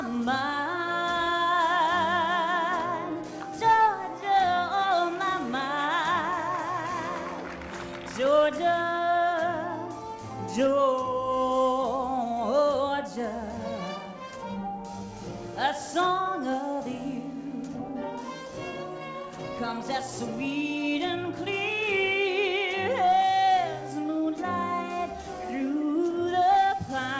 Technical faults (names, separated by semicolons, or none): none